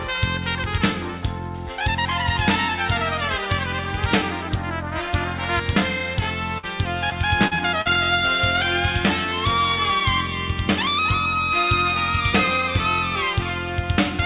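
At 6.58 to 6.65 s there is a burst of packet loss. About 40 ms of audio failed to arrive in time, and the receiver covered roughly 49 ms by extending the last sound and fading it, which gives a brief held, decaying continuation of the last sound in place of the real signal. When playback picks up again, about 11 ms of material has been skipped, so the resumed sound lands slightly ahead of where it left off.

From 7.10 to 7.87 s the audio turns choppy. This is repeated packet loss (robotic sound). Four separate holes, the longest 40 ms, are each patched by continuing the preceding sound, about 15% of the stretch in total. The gaps come close together, so the concealed fragments and the genuine audio keep alternating. Through both events the band stops at 4 kHz, as expected from the G.711 call codec, which fits a 64 kbps stream.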